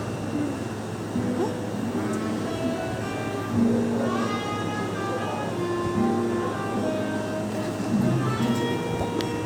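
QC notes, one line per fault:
No faults were heard anywhere in this clip. There is nothing in the sound to log.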